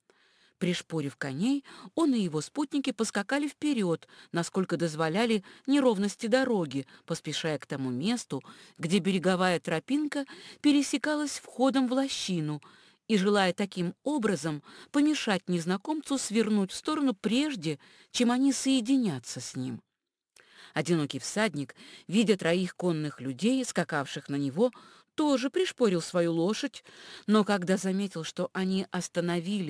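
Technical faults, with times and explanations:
Throughout: aliasing. Content above 11 kHz folds back down to false, unrelated pitches. The rate was cut from 48 kHz to 22 kHz without a proper low-pass filter first. The folded products sit roughly 25 dB below the signal. They give sibilant and bright sounds a gritty, metallic edge.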